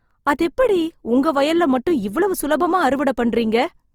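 From start to finish the speech has a grainy, rough texture with a noisy edge, pointing to a low bitrate, around 24 kbps, likely Opus compression in its music mode, where starved bands get filled with folded or noise-like content. Bandwidth stays full, reaching about 20.4 kHz.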